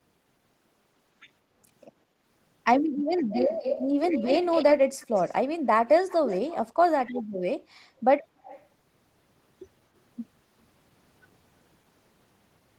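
From 2.05 to 2.19 s the background is gated by the echo canceller. While the far-end loudspeaker plays, the canceller pulls the microphone down by about 6 dB, so the room tone dips audibly for a moment before recovering.

An echo leak follows, with a delayed copy of the speech trailing about 232 ms behind at 3.31–3.87, 4.1–4.64, 5.0–5.34, 6.08–6.56 and 8.44–8.67 s. It fades from roughly 5 dB below the speech to about 25 dB below, most likely from a speakerphone canceller letting through residual pickup.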